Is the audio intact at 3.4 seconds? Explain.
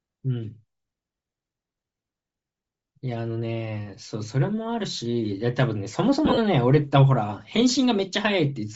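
No. At 3.4 seconds, as throughout the speech, there is plainly audible Bluetooth LC3 compression damage, likely from a low-rate LE Audio link. The codec works in short transform frames, here consistent with 7.5 ms blocks at around 32 kbps, and discards much of the upper spectrum, substituting shaped noise. The voice takes on a breathy, grainy edge. On a spectrogram the high band looks smeared and speckled rather than harmonic; the waveform itself shows little.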